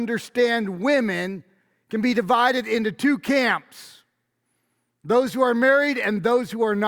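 Speech with two bit error spikes: sharp broadband ticks at 2.15 s and 6.04 s, peaking about -29 and -23 dBFS. A flipped bit jumped one or two samples briefly.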